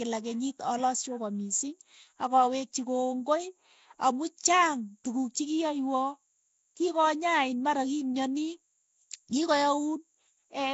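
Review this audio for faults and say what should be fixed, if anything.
The speech was likely passed through Nellymoser compression, Flash's old microphone codec, which fits a rate near 32 kbps. Coding short blocks at a fixed two bits per sample leaves starved bands filled with noise, so throughout, the speech carries a rough, hissy halo and a smeared, underwater quality, with nothing above 7.7 kHz. To prevent it, record or transmit through a modern codec such as Opus at an adequate bitrate instead of Nellymoser.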